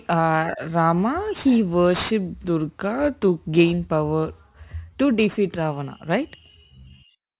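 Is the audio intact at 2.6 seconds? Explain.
No. At 2.6 seconds, as across the whole clip, the speech carries aliasing. The audio sounds like it was resampled from 48 kHz down to 8 kHz without an anti-alias filter, so energy above the 4 kHz folding point reflects back into the audible band at wrong pitches, roughly 20 dB below the speech. Sibilants turn gritty and metallic, with the spectrum running hard up to 4 kHz. Simple band-limiting would sound muffled but clean, not harsh.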